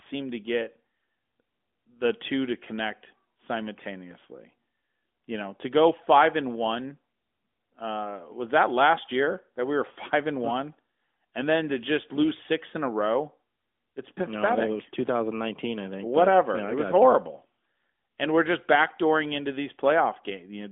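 It's a speech recording, and there's nothing technically wrong with it.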